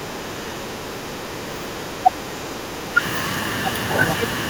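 A speech clip in which the room sound is pulled down from 0.0 to 1.75 s and again from 2.39 to 2.92 s, by about 6 and 7 dB. That is background gated by the echo canceller while the far end plays. Only the ambience sinks, shallowly, and it recovers when the canceller releases. At 2.03 to 2.11 s the talker's own voice cuts out briefly and far more deeply. That is likely speech suppressed in double talk, with the canceller mistaking near-end speech for echo and turning both down.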